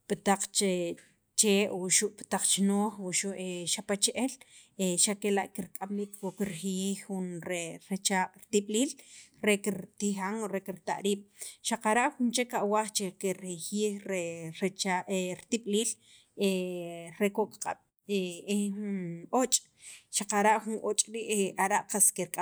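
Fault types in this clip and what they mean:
No fault types can be heard in this clip.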